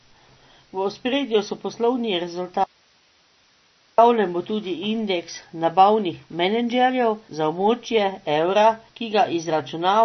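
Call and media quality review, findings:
Speech band-limited throughout, nothing above about 6.1 kHz. Watery, swirling texture, smeared attacks. Likely MP3 compression at low bitrate, fits roughly 32 kbps. Encoder drops treble, zeroes weak lines frame to frame.

Audio dropout to a faint residue, 2.64 to 3.98 s, 1.34 s lost. After "ospredju so poslovni", only hiss, well below signal level. Abrupt return at "bo tudi indeks nabavnih". Likely upstream signal loss, path after break still live.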